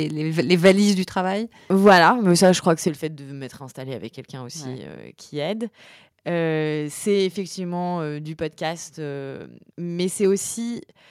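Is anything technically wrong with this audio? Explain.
Yes. Between 0.65 and 0.72 s, just before "du travail", and again from 1.85 to 1.91 s, between "du travail" and "mais ça je crois", the likely cause is microphone overload. Input gain set too high drives peaks about 6 dB and then about 3 dB past the converter's ceiling. Their tops are sheared flat, with roughly a tenth and then a smaller share of samples clipped, giving those loudest moments a harsh, crackling edge.

Right on the second distorted peak, at 1.88 s, the microphone volume is stepped down by 3 dB. It drops again by 6 dB at 2.88 s, between "je crois que c'est" and "le fait de m'être". This points to call software reacting to the clipping by cutting the device's input level in steps. Voice and background fall together, abruptly, at each point.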